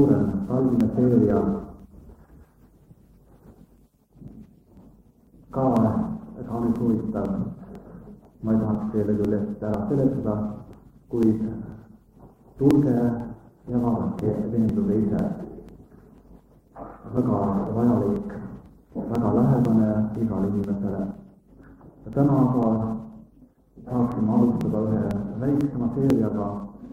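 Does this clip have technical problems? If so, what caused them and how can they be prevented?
Yes. Periodic USB or driver dropouts: a background task stalls the USB bus or audio driver every 0.496 s, from 0.31 s to 26.6 s. Each stall skips a few milliseconds of audio, producing about fifty evenly spaced ticks wherever sound is present. To prevent them, disable the background task or move the interface to a dedicated USB controller.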